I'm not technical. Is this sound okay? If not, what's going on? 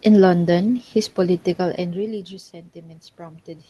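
No, not quite. From 0.64 s to the end there's automatic gain rising: the incoming sound got much quieter, so the system slowly turned its own volume up. The voice and the room noise behind it swell louder together over those few seconds.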